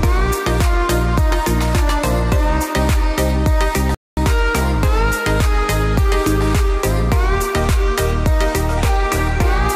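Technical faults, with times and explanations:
3.95–4.17 s: playback stall. The audio stops abruptly in mid-flow and stays silent for about 230 ms before the sound returns. This is likely the player running out of buffered data or its output thread being blocked, so nothing reached the output until it recovered.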